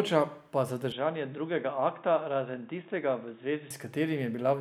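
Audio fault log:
0.92–3.71 s, input switched to a poorer device: the audio turns boxy, cut off above 3.8 kHz, a few dB quieter with faint fresh hiss, likely a narrower-band mic taking over.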